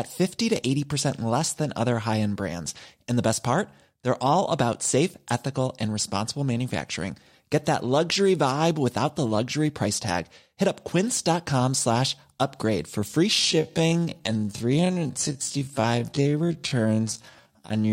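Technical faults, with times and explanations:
13.27 to 17.92 s, time-stretched section: from 13.27 s to the end, the speech abruptly slows to about 0.54 times its normal pace while its pitch stays the same. This is likely the result of software lengthening that stretch to fill a target duration, repeating short overlapping slices of the waveform to hold pitch.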